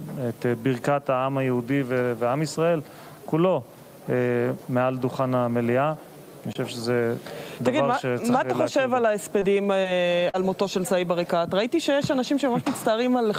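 Repeated packet loss (robotic sound) runs from 9.39 to 10.36 s. Over this stretch the stream keeps dropping or delaying data, leaving four short holes, the longest 42 ms, about 80 ms missing in all. Each hole is papered over by extending the sound just before it, roughly a tenth of a second of patched audio covering about 9% of the span. The result is a choppy, robotic texture with small pieces absent.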